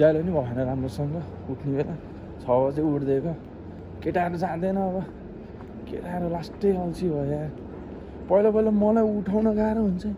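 No technical faults are audible.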